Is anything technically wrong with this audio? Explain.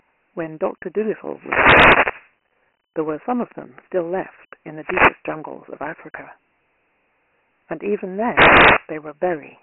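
Yes, two faults are present.

Throughout, the speech has been through Dialogic VOX ADPCM, whose coarse 4-bit step predictions, consistent with a 24 kbps stream, fail to track the waveform. The line band of 300 Hz to 3.7 kHz, with nothing above 3.8 kHz, sounds thin and boxy, and heavy gritty hiss clings to the speech.

From 1.27 to 2.36 s, 4.78 to 5.24 s and 8.24 to 8.90 s there are wireless microphone noise hits. Multipath reflections cancel the FM radio signal, so receiver noise rises into a swishing burst of static.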